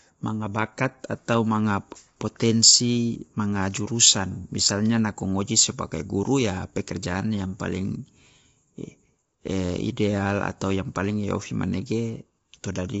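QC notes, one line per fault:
Throughout, low-delay AAC compression: the speech is plainly rough and grainy, with noise between the harmonics and nothing above 7.7 kHz. The likely cause is AAC-ELD at a bitrate that fits about 24 kbps, whose short frames resolve pitch harmonics poorly.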